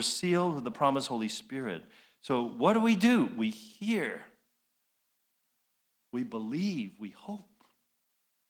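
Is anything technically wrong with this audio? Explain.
No, nothing is technically wrong.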